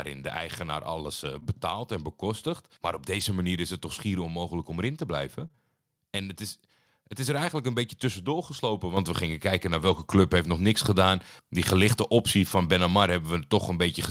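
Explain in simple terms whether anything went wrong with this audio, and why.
Several things went wrong in this speech recording.

Between 1.35 and 5.59 s there are scattered short gaps. Bits of the audio went missing in transit, about five times. Each hole was tiny, the longest around 20 ms. The receiver filled each one by stretching the sound just before it. Together the patches come to roughly a tenth of a second. You hear brief ticks or little hiccups rather than silence.

Three times, a lost packet was rebuilt from error correction. When a piece of the audio is lost, the next piece brings along a rough backup copy of it, and the player uses that instead. So there is no gap, but those moments sound grainier. This happens at 8.53 s, right after "eigenlijk een beetje tussendoor". It happens again at 12.47 s, after "gelichte optie". Both are very short. The longest case runs from 9.79 to 10.13 s, between "we gingen kijken naar" and "heeft nog niks gedaan". 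Several pieces were lost there, and about 180 ms of rough backup audio was played.

At 8.97 s the microphone volume stepped up. The call software decided the microphone was too quiet and raised it in one jump. The voice and the background noise suddenly get louder together, and they stay at the new level.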